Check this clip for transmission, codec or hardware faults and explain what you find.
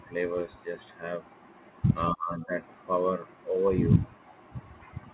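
One fault stands out against a narrowband call path, where nothing is heard above 4 kHz, consistent with a G.711-type telephone codec. From 2.13 to 2.56 s the speech is pulled down by roughly 25 dB for close to half a second. This is likely speech suppressed in double talk: with both ends active, the echo canceller mistook the talker for loudspeaker echo and attenuated everything, so the voice dips.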